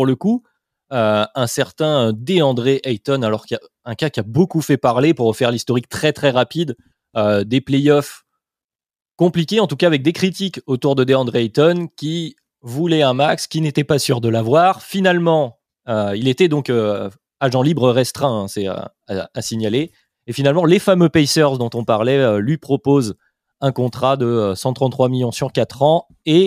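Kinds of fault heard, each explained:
No technical fault can be heard anywhere in the speech recording, and the signal holds steady and continuous throughout.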